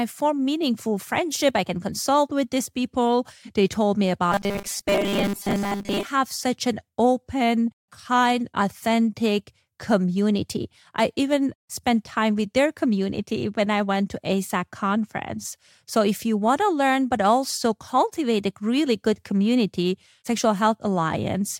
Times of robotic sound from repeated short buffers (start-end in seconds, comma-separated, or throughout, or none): 4.32-6.05